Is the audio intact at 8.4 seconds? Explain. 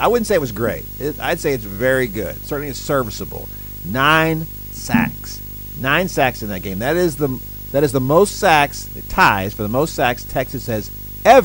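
No. Video or display buzz runs through the whole clip, including 8.4 s. A screen or video cable is coupling into the audio path, giving a 50 Hz field-rate buzz with hash above it and a thin 15.6 kHz line-rate tone, roughly 15 dB below the speech.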